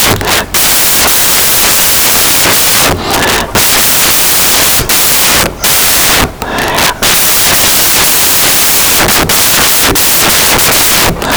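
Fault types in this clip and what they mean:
Samples built from the wrong bytes: the reader assembles each sample with its bytes misaligned or swapped, so the rapidly varying low-order bits end up dominating every value. Across the whole speech clip this comes out as loud, harsh broadband noise. Because it is produced from the signal itself, it differs from added background hiss, which stays at the same level through pauses and loud passages alike.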